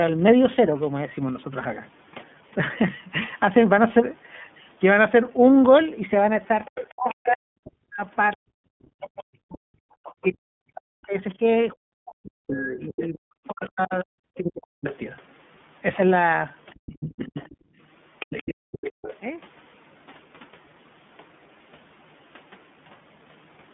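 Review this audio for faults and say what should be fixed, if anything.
Throughout the 24-second speech clip, iLBC codec damage is plainly audible. The line is limited to about 150 Hz to 3.5 kHz, so sibilants lose their edge, and voiced sounds have a rough, slightly synthetic grain. The sound points to iLBC's 30 ms frame mode, where each frame's excitation is coded on its own. The grain separates this from ordinary narrowband filtering, which dulls the sound but leaves it smooth. Using a wideband codec such as Opus would prevent it.

The other side's voice leaking through occurs from 6.66 to 7.13 s, 8.33 to 9.07 s, 10.04 to 14.95 s and 16.74 to 19.17 s. A second voice sits about 15 dB below the main speech, or about 25 dB below in the 8.33 s stretch. The likely cause is residual loudspeaker echo that the talker's own echo canceller failed to remove. Better echo cancellation or a headset on the talker's side would prevent it.

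Speech suppressed in double talk runs from 6.91 to 14.88 s, affecting roughly 7 s in total. The main voice dips in pieces, by as much as around 40 dB at its deepest, whenever the leaked voice is active. This was likely an echo canceller turning everything down because it could not separate the two talkers. Unlike a network dropout, the dips follow the other voice's activity instead of breaking the signal at random. A canceller with proper double-talk detection would prevent it.

Lost iLBC frames occur once, at 12.45 s. The gap fits a single 30 ms frame and is filled by a brief, slightly buzzy held sound. The decoder repeated the last pitch cycle with added noise to cover the missing packet. Because iLBC frames are coded independently, the voice is correct again immediately, with none of the smeared recovery that frame-dependent codecs show after a loss. Reducing packet loss on the network path, or adding jitter buffering, would prevent it.

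Background gated by the echo canceller appears between 17.55 and 18.72 s, totalling under half a second. The room sound drops by about 39 dB while the loudspeaker signal plays, then returns. The canceller clamped the microphone instead of subtracting the echo. This differs from double-talk suppression because here the background noise floor itself vanishes, not just the talker's voice. Comfort-noise insertion or gentler echo suppression would prevent it.

The call's microphone high-pass filtering, which removes only the lowest bass, is expected behaviour and needs no fix.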